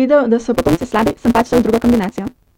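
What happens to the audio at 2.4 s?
At 2.4 s the speech is still under a block size mismatch (truncated), running from 0.53 s after "da so" to the end. Each block loses its tail, so the audio plays about 1.88 times faster at near-normal pitch with a 172 Hz buzz, consistent with a 256-sample read. A spectrogram shows evenly spaced vertical seams at that rate; the waveform shows regular discontinuities.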